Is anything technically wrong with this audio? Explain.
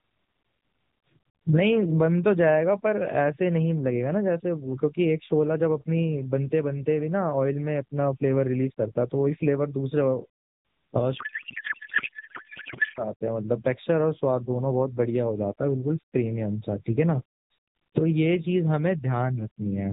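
Yes. From 11.18 to 13.08 s there is a codec payload misread: the receiver unpacks the AMR frames with their bit fields in the wrong positions, which fits octet-aligned AMR being read as bandwidth-efficient. The speech turns into garbled noise and warble that barely tracks it. The narrowband AMR character elsewhere, capped at 4 kHz, fits its 12.2 kbps mode.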